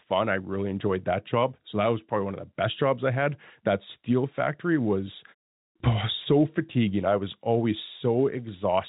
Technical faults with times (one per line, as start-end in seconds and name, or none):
none